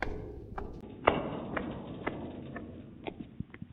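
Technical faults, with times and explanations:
0.81–3.72 s, input switched to a poorer device, likely: after a 20 ms gap, nothing above 3.8 kHz, level unchanged, and fresh background noise around 35 dB down.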